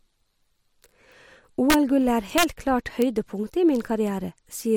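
Around 1.70 to 1.74 s, 2.38 to 2.43 s and again at 3.02 s, the speech cracks violently: integer overflow. Peaks pushed about 3 dB, then about 2 dB, past the ceiling wrap to the opposite sign instead of limiting, so they snap far harsher than clipping.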